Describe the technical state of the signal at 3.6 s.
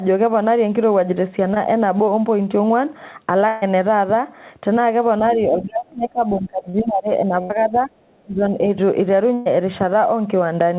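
At 3.6 s the signal is inside a burst of packet loss running from 3.48 to 3.64 s. About 140 ms of audio never arrived in time. The receiver covered the hole by stretching the last sound it had, about 137 ms of it, and letting it fade. The result is a held buzz or fading hiss with no true silence. The sound then jumps forward, skipping the lost stretch. The band stops at 4 kHz, which fits a G.711 mu-law call path.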